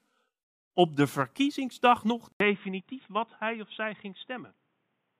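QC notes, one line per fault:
2.32–5.19 s, input switched to a poorer device: after "op de verkiezingsdag nog", an 80 ms gap in the waveform, then duller, slightly quieter sound. The spectrogram is empty above 3.8 kHz, likely from a narrower-band microphone.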